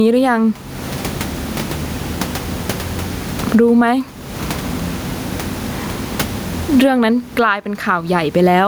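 All the way through, the speech has gain pumping, with the gain swinging by around 20 dB. The background room noise sits about 34 dB under the speech. The likely cause is the input gain set way too high, with a fast limiter clamping down on each loud syllable, so loud and quiet bits get squashed together.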